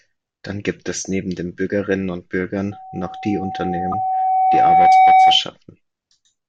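A speech recording, interrupted by loudspeaker feedback squeal from 2.71 s to 5.43 s: a steady 755 Hz tone grows over roughly two seconds until it sits around 15 dB above the speech, then stops. This is the classic acoustic loop, where a microphone hears the loudspeaker it drives and, at 755 Hz, the round-trip gain exceeds unity, so that one frequency keeps reinforcing itself. At 3.92 to 3.94 s, inside the squeal, a brief glitch of misplaced energy peaks at roughly −10 dBFS. That is a corrupt frame decoded. A single compressed frame arrived with damaged bits, and the decoder played it anyway, so misread gains and codes sprayed energy into the wrong frequencies for about one frame length.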